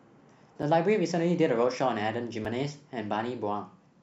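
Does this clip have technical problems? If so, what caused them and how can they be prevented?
Yes, there's a block of digital silence at 0.62 s and again at 2.45 s in the speech. Each is a 5.3 ms hole that drops straight to silence and back with no fade, so you hear a tick or dip at each one. That length fits a 256-sample buffer the program didn't fill in time. To prevent it, give the audio thread more headroom with a larger buffer or less competing CPU load so every buffer is delivered on schedule.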